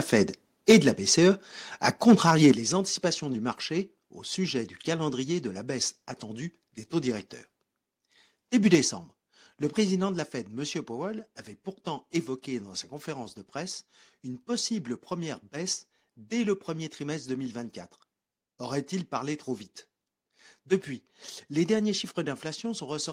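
From 0.69 to 1.25 s the loudest syllables turn harsh and crackly, about 6 dB past the converter's limit with a small share of samples flattened. This is microphone overload, likely from input gain set too high. The crackle follows the peaks only, unlike steady codec distortion. It returns from 1.86 to 2.52 s (about 4 dB over) and briefly at 8.73 to 8.75 s.

The microphone volume stepped down at 0.72 s by about 3 dB, at 2.52 s by about 8 dB, and at 8.75 s by about 4 dB. Each is likely the call software cutting input gain after a clipped peak. Voice and background drop together in a single step, not the gradual slide of a fade.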